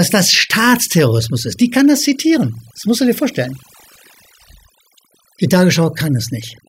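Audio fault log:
Throughout: overdone noise removal. Noise reduction set too strong has pulled individual frequency bands down or out wherever they sat near its noise estimate, taking quiet parts of the speech with them. Between phrases the background drops to near silence flecked with twinkling specks. A spectrogram would show isolated bright dots scattered over a dark floor in the pauses, with ragged, holed-out harmonics in the speech.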